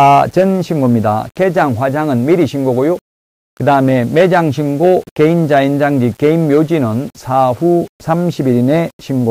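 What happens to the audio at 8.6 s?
At 8.6 s the sound carries the same grainy, signal-following distortion heard through the whole clip, likely low bit depth without dither: rounding to about 7 bits leaves error around 35 dB below the signal. Quiet stretches turn gritty. A waveform zoom shows stair-stepped levels, and a spectrogram shows a rough noise haze that tracks the sound.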